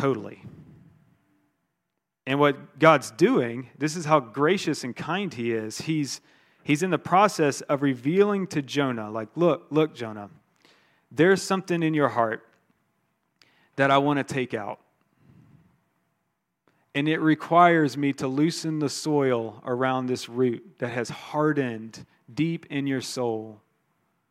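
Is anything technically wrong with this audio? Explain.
No, nothing technically wrong is audible in this speech.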